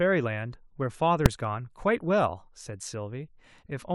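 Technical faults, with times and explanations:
1.26 s, invalid numbers at full scale: a processing block of about 2.67 ms, which fits a 128-sample block, was filled with infinite or invalid values that clamped to the maximum output level. Because the block is so short, the start and end transitions merge into a single loud bang in the speech.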